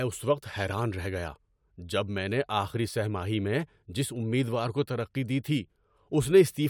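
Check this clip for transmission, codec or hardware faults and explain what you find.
Nothing stood out on listening to this speech recording.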